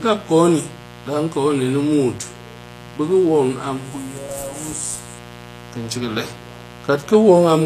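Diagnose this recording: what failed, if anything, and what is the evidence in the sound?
The analogue wiring failed: poor grounding or shielding, or a nearby dimmer or rectifier, let sharp switching spikes from the 60 Hz mains into the signal. For the whole clip a raspy mains buzz sits roughly 20 dB under the speech, its harmonics reaching several kilohertz.

The codec stage likely caused the second fault, HE-AAC compression. The treble is rebuilt from copied lower bands, so the s sounds come out gritty and lispy throughout. Nothing reaches above 14.9 kHz, and the plainly audible damage points to a low bitrate near 24 kbps.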